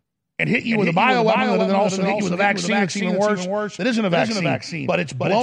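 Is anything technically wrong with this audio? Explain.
Yes. The speech carries a doubled audio track from start to finish. A second copy of the whole signal runs roughly a third of a second behind the first, about 5 dB quieter. The likely cause is the same audio being captured twice, once through a slower path, or an edit leaving two copies out of step. The copy has full bandwidth and no decay or room colour. It sounds like a dry, distinct slapback trailing every syllable.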